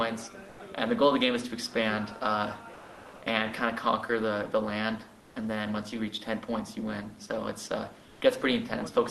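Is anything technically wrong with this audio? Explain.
Yes. Comfort noise replaces the background at 0.49–0.59 s, 2.73–3.21 s, 5.21–5.35 s and 8.07–8.21 s. The sender likely went silent under Opus discontinuous transmission, and the receiver filled each gap with synthetic hiss. The substitute is flat and featureless, about 4 dB quieter in the first gap, about 1 dB quieter in the second, level in the third and about 2 dB louder in the last.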